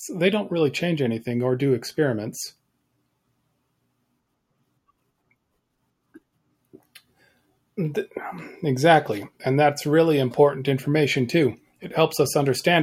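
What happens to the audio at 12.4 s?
Nothing goes wrong at 12.4 s; the speech continues intact there, with no dropout, click, distortion or other fault.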